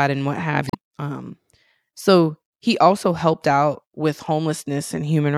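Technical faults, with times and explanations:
0.67–0.75 s, damaged data in a compressed stream: for about 80 ms the speech breaks into a short chirp, squawk, click or hole. Corrupted bytes in the encoded stream leave the decoder misreading those frames, losing sync and hunting for the next valid frame header before normal playback resumes. On a spectrogram this shows as a brief vertical disruption cutting across the speech harmonics; the waveform shows an abrupt break with hard edges.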